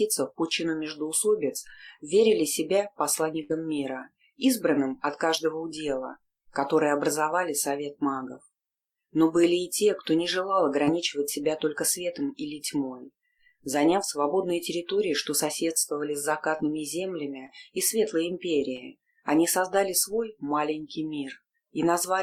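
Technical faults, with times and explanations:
3.43–3.51 s, burst of packet loss: About 60 ms of audio never arrived in time to be played, so the receiver stretched the last good sound across the hole for roughly 59 ms, lowering its level as the gap lengthened. The result is a brief held, fading continuation rather than silence. Playback then jumps ahead to the audio that follows, and the material that should have filled those 60 ms is simply gone.
10.85–10.89 s, 16.57–16.60 s, 17.46–17.50 s and 18.76–18.80 s, short concealed packet loss: Each of these four events is a single 20 ms piece of audio that was lost in transit. The decoder extrapolated from the preceding sound to patch between 13 and 19 ms of it, then cross-faded back into the real signal. Each patch is heard as a momentary smear or wobble, and a very short transient at that moment can disappear.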